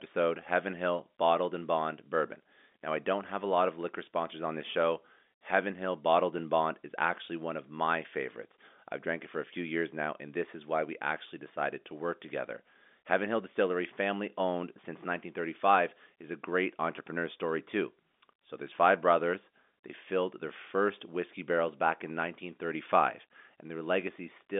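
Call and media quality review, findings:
No faults found; telephone-band G.711 audio as expected.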